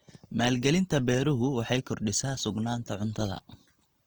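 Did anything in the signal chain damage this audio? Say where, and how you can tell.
Yes. Across the whole speech clip the tone is rough and grainy, with noisy fizz where clean harmonics should be, while content still reaches 20.2 kHz. That points to the codec stage: likely Opus compression in CELT mode, filling starved bands with noise at a rate near 24 kbps.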